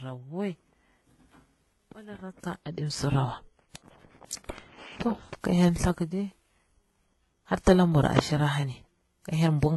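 Transcoding between lossy codecs, throughout the speech: nothing sounds above 11.8 kHz, and a very low-rate codec's smeared, swirly artefacts sit under a second codec's own coding noise. The likely chain fits a 16 kbit/s HE-AAC encode later re-encoded as WMA around 64 kbit/s.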